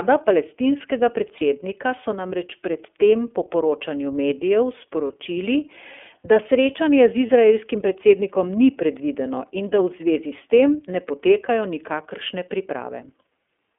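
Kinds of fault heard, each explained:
iLBC codec: The whole clip runs through the iLBC narrowband VoIP codec. The speech sits in a telephone band from roughly 250 Hz up to 3.4 kHz, so there's no air or sparkle on top and little weight underneath. The coding damage is plainly audible, giving the voice that slightly rough, synthetic edge. The grain of it fits the 13.33 kbps mode with 30 ms frames, where each frame is coded on its own.
lost iLBC frames: Three single frames go missing, each about 30 ms, at 1.37–1.42 s, 5.07–5.11 s and 7.26–7.29 s. In each gap the decoder covers the hole by repeating the last pitch cycle with some noise mixed in. You hear a brief held, faintly buzzy vowel-like smear. Because the frames don't depend on each other, the speech snaps back cleanly right after each one.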